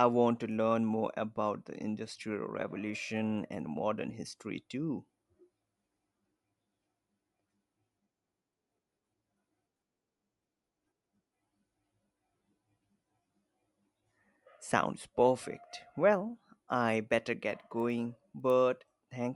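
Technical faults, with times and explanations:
17.1–18.6 s, resampler restarted on every block: the upsampling, which points to 24 kHz to 48 kHz, treated each 100 ms block separately, so every block edge lacked its true neighbouring samples. The resulting edge errors give a steady 10 Hz ticking under the speech.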